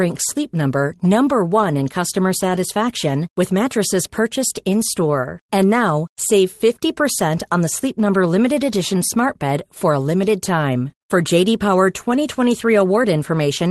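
Nothing goes wrong here; the speech comes through an ordinary call connection, and the top end stopping at around 12 kHz is simply what you'd expect from an Opus call codec at a moderate bitrate rather than anything faulty.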